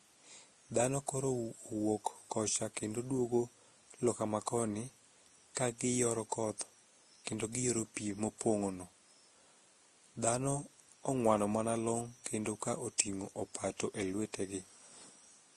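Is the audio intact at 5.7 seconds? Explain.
No. At 5.7 seconds the speech carries the same damage heard through the whole clip, most likely from transcoding between lossy codecs. Nothing survives above 12.1 kHz, and the smeared, swirling coding artefacts have a second layer of different artefacts on top. That mix fits a roughly 30 kbit/s Vorbis encode later re-encoded as Opus at a similar rate, with the second coder spending bits on the first coder's debris. A single low-bitrate encode would show only one artefact character.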